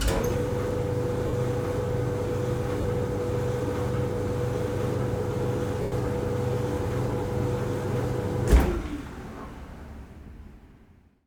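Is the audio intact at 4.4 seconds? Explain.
Yes, the audio is intact at 4.4 seconds, with no fault at that moment.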